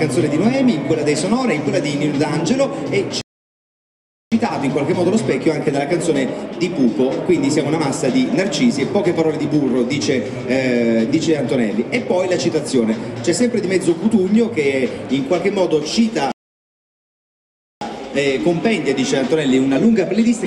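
Two rebuffering stalls interrupt the sound, from 3.21 to 4.32 s (about 1.1 s) and from 16.32 to 17.81 s (about 1.5 s). The player's buffer ran dry and playback paused until data arrived. Unlike a dropout, playback resumes exactly where it stopped, so time is added but nothing is lost.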